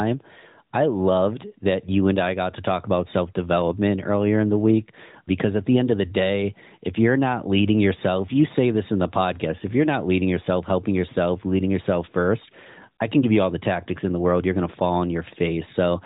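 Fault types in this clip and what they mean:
There are no fault types in this clip.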